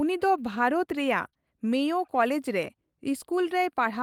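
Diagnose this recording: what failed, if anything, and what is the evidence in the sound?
Two packets of this speech were lost in the network and rebuilt from error correction, one at 1.25 to 1.27 s and one at 2.63 to 2.65 s. Each is a 20 ms stretch that sounds rougher and noisier than the audio around it, with no break in continuity. The packet that followed carried a low-bitrate copy of the missing one, and the decoder played that copy. This differs from concealment because the sound is still real content, only coarser.

Short concealed packet loss follows the first rebuilt packet closely. Two adjacent 20 ms packets failed to arrive in time, at 1.29 to 1.34 s and 1.34 to 1.37 s. The receiver had no copy to fall back on, so it extended the last sound it had, from its pitch if it was voiced or as shaped noise if not, then blended back into the real signal. That comes through as a brief smear or wobble rather than the coarse but genuine texture of the rebuilt frames.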